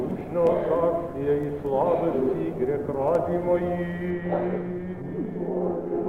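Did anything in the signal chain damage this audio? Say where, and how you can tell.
Yes. From 4.10 s to the end the top end sags. The highs roll off smoothly, with no sharp edge, about 8 dB down at 10 kHz relative to 1 kHz, so the sound turns dull and muffled. That's de-emphasis applied wrongly: a treble-cut stage meant to undo pre-emphasis ran on material that didn't have any, or ran a second time. It most plausibly sits at decode or playback, where that correction normally lives.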